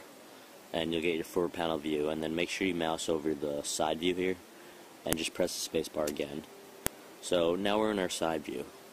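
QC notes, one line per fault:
5.13 s and 6.87 s, file header played as audio: joined pieces kept their WAV headers, whose bytes play as samples, giving a sharp snap; a lone full-band vertical line on the spectrogram, a tall spike on the waveform.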